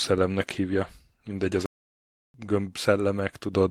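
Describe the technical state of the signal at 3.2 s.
At 3.2 s the speech is inside a call bitrate drop that runs from 0.35 to 3.53 s. The sound fits an encoder pushed from about 32 kbps down to around 18 kbps. The rate sits at its lowest for about 1.6 s. The bandwidth estimate fell, so the encoder had fewer bits to spend. It codes the speech more coarsely. The result sounds rough and watery until the rate recovers near the end.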